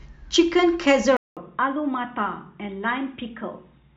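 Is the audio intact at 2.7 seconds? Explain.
No. From 1.17 s to the end, the speech likely comes from an input switched to a poorer device: after a 200 ms gap it is quieter and duller, cut off above 3.8 kHz, with a faint new noise floor on the spectrogram.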